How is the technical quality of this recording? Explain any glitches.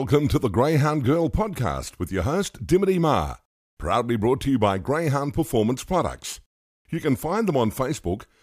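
The technical quality of the recording holds up, with no glitches to explain.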